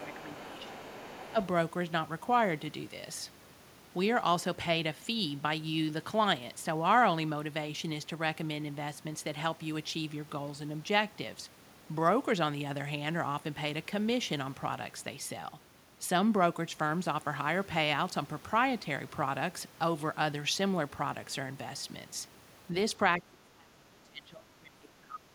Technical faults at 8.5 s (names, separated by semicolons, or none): none